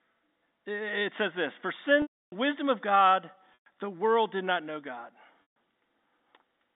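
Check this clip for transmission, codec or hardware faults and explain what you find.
Packet loss with pitch repetition occurs three times in this telephone-band speech. At 2.02 to 2.32 s, just before "wisdom of", about 300 ms of audio went missing; at 3.54 to 3.66 s, before "the world did not", about 120 ms; and at 5.42 to 5.46 s, about 140 ms. The gaps fit lost packets of roughly 20 ms each. The receiver filled each hole by looping the last pitch cycle and fading it down, so each loss sounds like a brief held, buzzy tone that sinks toward silence before speech cross-fades back in.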